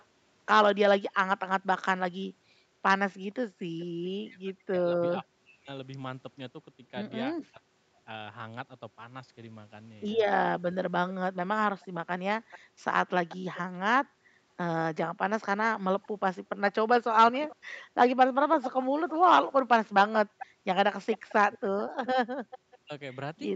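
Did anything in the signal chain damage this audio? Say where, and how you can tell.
Yes. The damage happened in call processing. An echo leak returns a faint, delayed copy of the speech at 0.00–0.05 s, 3.79–3.86 s, 11.09–13.59 s and 15.41–22.78 s. It trails the original by about 435 ms (467 ms in the first scrap) and grows from very faint, about 35 dB down, to only about 15 dB below the speech in the last stretch. On a spectrogram the harmonic pattern repeats, fainter, shifted right by that delay. The likely cause is a far-end speakerphone whose echo canceller let residual loudspeaker pickup through.

Speech suppressed in double talk appears at 4.22–5.70 s, 7.47–8.06 s and from 21.36 s to the end. While both sides are active, the speech level falls in chopped pieces, by as much as about 40 dB. The dips add up to about a second in the first span and about a third of a second in the second. 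The waveform shows notched gaps in the envelope, and the spectrogram shows vertical holes across the band. The likely cause is an echo canceller that could not tell its own talker from the echo and turned both down.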